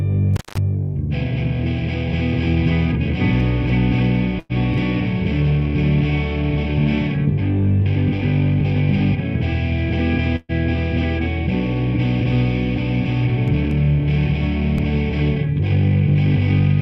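From 0.34 to 0.58 s, an intermittent contact briefly opens the line for about 190 ms. The sound cuts out with crackle at both edges, leaving hiss. On the waveform this shows as a collapsed stretch bracketed by sharp spikes. On a spectrogram, broadband clicks frame a thin noise floor.

A burst of packet loss at 4.39 to 4.52 s and another at 10.36 to 10.52 s are concealed by continuing the last sound and fading it. The first fill lasts 100 ms and covers 60 ms of missing audio, which pushes the following audio 40 ms later. The second fill lasts 127 ms and covers 120 ms of missing audio, and includes 10 ms of silence. On the spectrogram, each gap shows the last sound smeared out and fading before the audio resumes abruptly.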